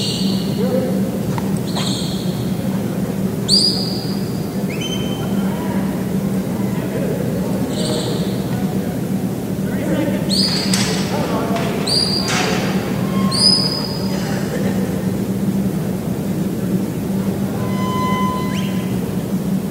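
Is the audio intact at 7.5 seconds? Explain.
Yes, at 7.5 seconds the audio plays through cleanly, with no dropout, glitch, clipping or other fault to be heard at that point.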